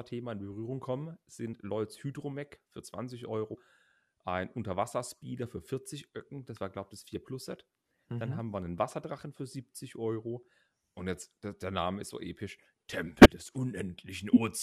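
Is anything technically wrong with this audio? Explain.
Yes. The speech has compressed frames skipped in three places: 1.53 to 1.55 s, 6.55 s, and 13.21 to 13.26 s. Whole coded frames never reached the output, either lost from the file or rejected by the decoder as corrupt, so playback leaps forward by whole frames, roughly 50, 20 and 100 ms. At each join the speech jumps ahead.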